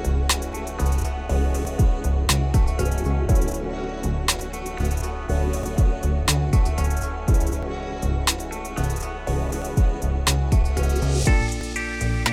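Overlap between stream segments produces tiny skips at 1.65, 3.64, 5.63, 7.63, 9.62 and 11.61 s: every 2 seconds, overlapping segment boundaries trim real audio, leaving waveform jumps.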